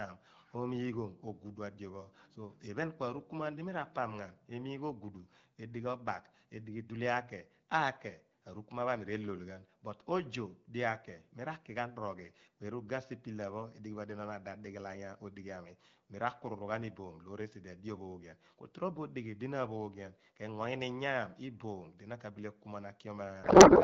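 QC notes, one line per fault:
23.43–23.84 s, codec payload misread: the AMR wideband speech collapses into garbled noise and warble that barely tracks it, through to the end. This points to octet-aligned frames decoded as bandwidth-efficient, so every field is read from the wrong bit position.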